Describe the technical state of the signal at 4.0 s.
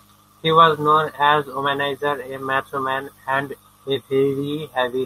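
Just before 4.0 s, from 3.93 to 3.97 s, right after "a macho man and", short concealed packet loss occurred: about 20 ms of audio never arrived, so the receiver extended the preceding speech to fill the gap and blended back. This leaves a brief smear or wobble in the speech.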